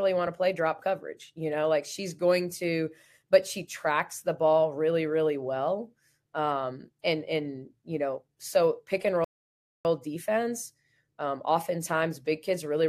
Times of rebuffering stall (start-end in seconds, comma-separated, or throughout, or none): 9.24-9.85